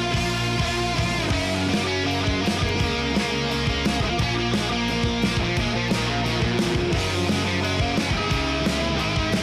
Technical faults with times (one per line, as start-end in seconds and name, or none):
2.69 bit error spike
5.88 bit error spike
8.03 bit error spike